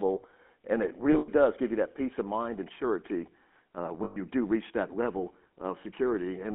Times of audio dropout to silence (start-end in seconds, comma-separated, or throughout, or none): none